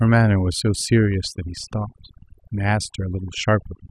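Overdone noise removal runs throughout the speech. Heavy noise reduction cut bands near the noise estimate, leaving twinkling specks in near silence.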